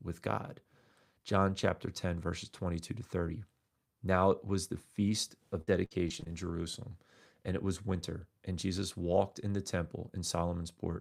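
From 5.61 to 6.29 s, right after "it was the feast", the speech breaks into repeated packet loss with a robotic sound. Audio data goes missing again and again in quick succession. Each hole is covered by stretching the preceding sound, so about a quarter of this stretch is synthetic fill. Roughly 180 ms of signal is absent in total, with the longest gap at 58 ms. The result is choppy, robotic-sounding speech with fragments dropped.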